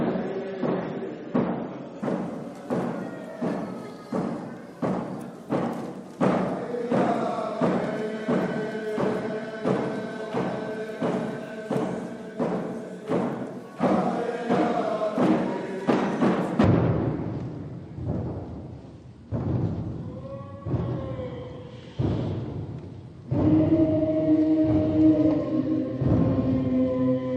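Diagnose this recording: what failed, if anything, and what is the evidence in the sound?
The first failure is in the network and codec stage: an adaptive stream starting at a low bitrate. For the opening 2.0 s the player was on a lean rendition while it gauged the connection. Nothing is present above 8.2 kHz, and coding smear and swirl are heavier, which fits an MP3 stream near 32 kbit/s. At 2.0 s it switches up to something consistent with 128 kbit/s, and the top end returns abruptly, with no gap or dropout.

The second is a section at the wrong speed, from 16.64 s to the end. It likely comes from the editing or playback stage, where that part was fitted to a mismatched clock. From that instant the audio runs at 0.53 times its recorded speed, so tempo and pitch fall together: everything becomes slow and heavy and sits roughly ten semitones lower. Because speed and pitch move as one, this is a rate error rather than a pitch effect.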